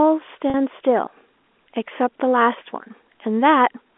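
At 0.50 s the stream drops about 40 ms of data, which fits two consecutive 20 ms packets going missing, and the receiver conceals the gap with packet loss with pitch repetition: it loops the last pitch period of the speech to fill the hole until 0.54 s. Because the gap is short, this comes across as a brief held, slightly buzzy sustain, heard through the narrow telephone band of the G.711 A-law line.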